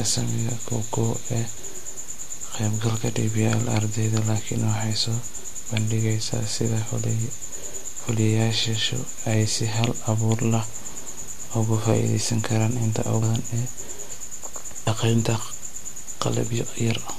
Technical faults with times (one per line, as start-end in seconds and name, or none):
1.56 compressed frames skipped
13.21 compressed frames skipped
14.86 compressed frames skipped